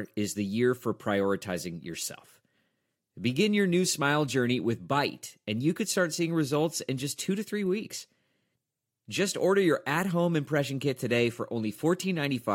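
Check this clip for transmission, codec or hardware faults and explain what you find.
Nothing stood out on listening to the recording.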